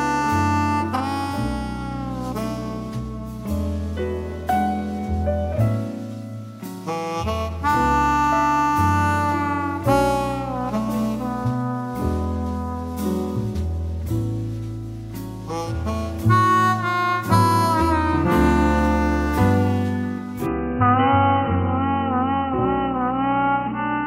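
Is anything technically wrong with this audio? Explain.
Yes. From 20.46 s to the end, the sound turns dull and boxy, with nothing above 3 kHz and a faint new noise floor. The input likely switched to a poorer device.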